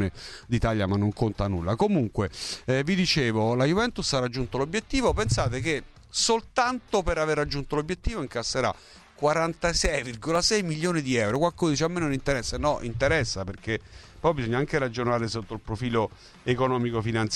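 Between 9.85 and 12.35 s, periodic USB or driver dropouts blank out a fraction of a millisecond every 0.5 s, leaving evenly spaced ticks in the sound.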